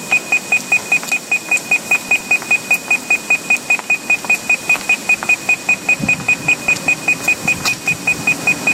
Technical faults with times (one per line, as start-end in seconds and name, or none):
6.51-6.84 DAB burbling